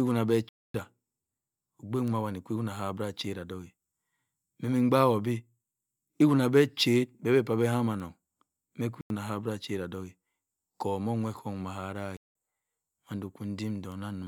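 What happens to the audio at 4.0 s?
Nothing goes wrong at 4.0 s: the speech runs on intact there, with no dropout, click or distortion.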